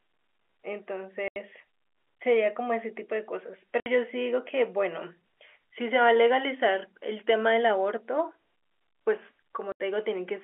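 At 1.28, 3.80 and 9.72 s the speech drops into dead silence for 80, 60 and 80 ms. This is packet loss filled with silence, with gaps in steps that fit 20 ms packets. Unlike concealed loss, nothing is smeared or repeated. Each hole is empty, with hard edges, over the band-limited G.711 telephone sound.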